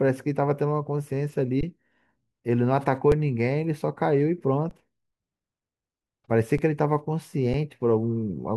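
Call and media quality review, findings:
Underrun with held sample, output path: speech freezes flat, 1.61 to 1.63 s, then 3.12, 4.70, 6.58 and 7.54 s, 5 to 20 ms each. Buffer ran dry, converter held its last value. About 5 to 20 ms of audio skipped at each.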